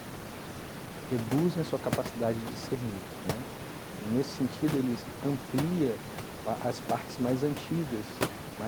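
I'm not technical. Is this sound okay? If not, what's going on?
Yes, no faults: the background you may notice under the speech is ordinary noise from the room, sitting below the voice.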